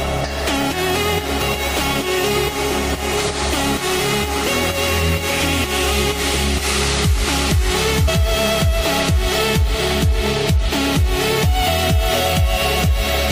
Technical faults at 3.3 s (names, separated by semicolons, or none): damaged data in a compressed stream